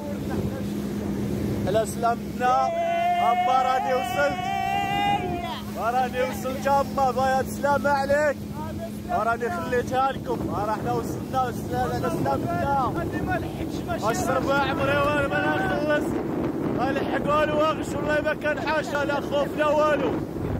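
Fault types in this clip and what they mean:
Overlap between stream segments: 6 s segments overlap, cutting about 5–6 ms at each join; the cuts appear as waveform jumps and thin vertical spectrogram lines.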